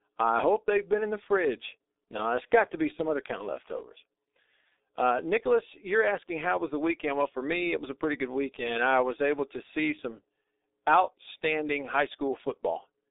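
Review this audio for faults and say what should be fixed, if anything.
The speech runs through a G.723.1 codec for the whole clip, and the damage is heavy. The bandwidth points to a low-rate telephony path of about 6 kbit/s, coding the audio in 30 ms frames. The line passes only 300 Hz to 3.7 kHz, and the coarse speech model updates too slowly to follow rapid changes. As a result, the speech sounds muffled and hoarse, with smeared consonants and no low-end body. To prevent this, capture or route the call through a wideband, higher-bitrate codec rather than G.723.1.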